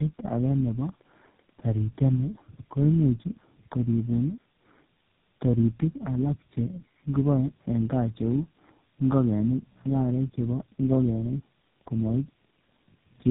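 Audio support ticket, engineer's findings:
Tandem speech coding, throughout the clip. Rough, muffled, warbly speech, nothing above about 3.8 kHz. Points to three low-rate codecs in series, likely G.729A, AMR-NB and GSM full rate, each re-encoding the previous decoder's already degraded output at network borders.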